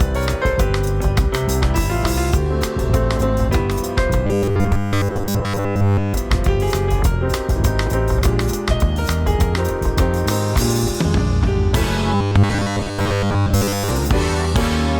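From 4.27 to 6.16 s, and again from 12.15 to 13.91 s, the sound collapses into a rigid metallic buzz at 100 Hz: robotic sound from repeated short buffers. The likely cause is audio arriving too seldom, so playback loops the last 10 ms block while most of the real signal is skipped. A spectrogram shows evenly spaced horizontal lines every 100 Hz, and the waveform shows near-identical 10 ms cycles repeating.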